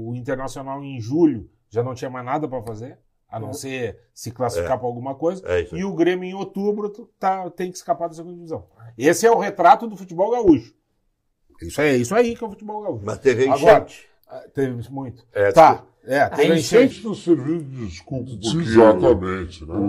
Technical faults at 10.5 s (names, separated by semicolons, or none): loud pop